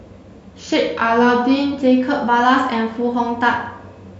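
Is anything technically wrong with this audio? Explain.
Yes. From 0.60 to 1.81 s there is a drift correction step. Clock-matching software likely slowed playback by 6.2% in one jump to refill its buffer. The speech drops 111 cents, just over a semitone, sounding lower and slower, then snaps back to normal.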